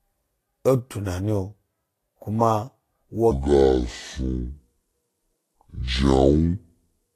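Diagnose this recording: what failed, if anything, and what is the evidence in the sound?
Throughout, the speech sounds hissy and grainy, with roughened tones, smeared consonant attacks and nothing above 14.1 kHz. This points to the codec stage. The likely cause is Vorbis compression at a low setting, consistent with roughly 33 kbps, which quantises treble detail so coarsely that it turns to noise.

From 3.31 s to the end, the speech abruptly slows and deepens, playing at 0.594 times its proper speed and sounding roughly ten semitones lower. This is a section at the wrong speed, likely produced at the playback or editing stage by clocking that portion at the wrong rate, so pitch and tempo fall together.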